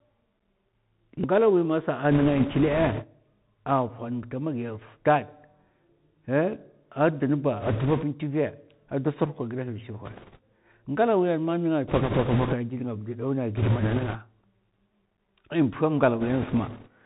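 Throughout, the speech has passed through the Bluetooth CVSD headset codec, a one-bit delta coder that fits a 64 kbps link. Everything above 4 kHz is gone, s sounds turn scratchy, and a granular hiss sits under the speech.

Bit errors on the Bluetooth voice link then corrupt the stream in short bursts: 2.11–3.04 s, 7.60–8.05 s, 10.05–10.39 s, 11.88–12.54 s, 13.57–14.17 s and 16.20–16.87 s. Each flipped bit carries little weight, so there are no loud clicks, only a rushing crackle, strongest around 11.9 s and lightest near the end.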